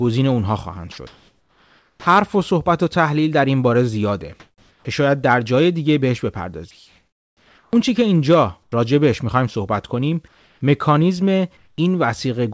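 From 0.92 to 2.06 s the speech is chopped by the voice detector. It likely toggled repeatedly, so quiet word edges drop into synthetic fill.

Comfort noise replaces the background at 4.40 to 4.85 s, 6.71 to 7.73 s, 8.63 to 8.72 s, 10.28 to 10.61 s and 11.57 to 11.78 s. The likely cause is transmission pausing during silence. The real background turns flat and featureless. It is about 7 dB and 9 dB quieter in the second and third gaps, about 3 dB quieter in the fourth, and nearly unchanged elsewhere.

At 7.71 s the onset is clipped by the voice detector. It likely reacted late, so the first 20 ms are lost and the sound starts abruptly. Through the G.722 call path, nothing above 8 kHz is present.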